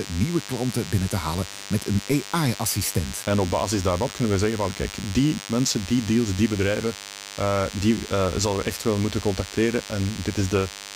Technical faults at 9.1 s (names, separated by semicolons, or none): DECT cordless phone buzz